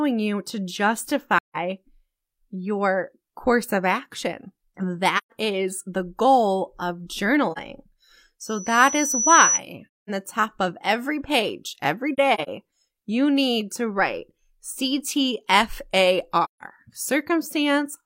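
AAC frame loss with muting leaves soft-faded silent gaps at 1.37–1.56, 5.17–5.32 and 7.52–7.58 s (after "is the goal of"). The decoder zeroed the missing frames.

A loudspeaker feedback squeal runs from 8.42 to 9.60 s. A 5.9 kHz tone swells over about a second to roughly 5 dB above the sound.

More muted gaps follow at 9.91–10.10 s (before "the top of every") and 16.44–16.63 s. Between "of every page every" and "you need to write", 12.13–12.49 s, short dropouts of about 40 ms are scattered.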